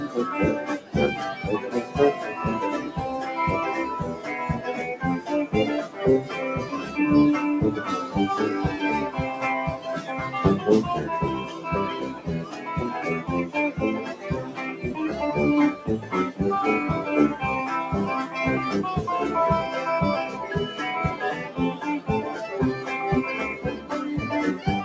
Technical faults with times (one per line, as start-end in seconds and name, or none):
11.46-11.66 sound cut by the noise suppressor
12.45-12.67 sound cut by the noise suppressor
15.75-16.12 sound cut by the noise suppressor
23.55-23.91 sound cut by the noise suppressor